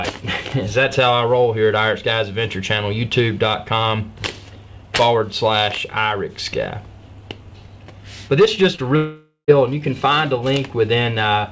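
The audio came through a WebRTC call path using G.722 at 64 kbps, so nothing is heard above 8 kHz. From 8.76 to 8.80 s, about 20 ms of packets failed to reach the decoder in time, a short concealed packet loss. The receiver extended the preceding sound across the hole and blended back into the real audio, which is heard as a brief smear or wobble. Shortly after, from 8.96 to 9.50 s, roughly half a second of audio is missing, likely a long network dropout in which nothing arrived. The receiver continued the last sound as a buzz or hiss that fades away, leaving about 80 ms of silence before the audio resumes further on, with the lost stretch never played.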